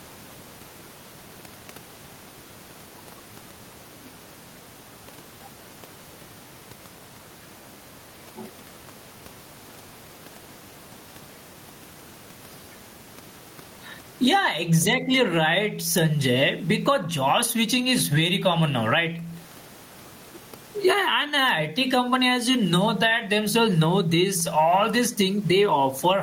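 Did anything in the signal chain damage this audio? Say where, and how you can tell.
Yes. Gain pumping runs through the whole clip, most likely from input gain set far too high with a fast limiter or compressor in the capture or call-processing stage clamping it back down. Each loud speech onset pulls the level down, and in every pause the gain climbs again; the room noise sits about 38 dB below the speech. The swing is around 15 dB, leaving the speech squashed and flat in dynamics.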